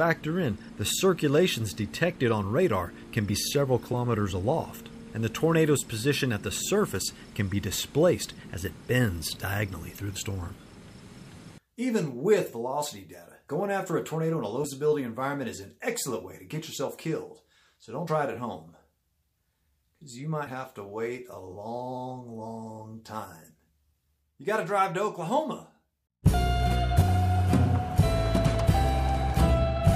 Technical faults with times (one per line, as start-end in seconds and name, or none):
3.93 compressed frames skipped
10.15 compressed frames skipped
14.63 compressed frames skipped
18.07 compressed frames skipped
20.46 compressed frames skipped
27.01 compressed frames skipped